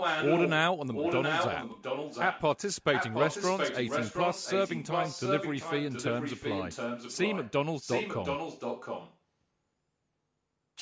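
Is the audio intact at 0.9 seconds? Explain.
No, an echo leak runs from 0.93 to 2.42 s: a copy of the speech about as loud as the original, 720 ms behind, likely from incomplete loudspeaker echo cancellation. On a spectrogram the speech patterns repeat, shifted later.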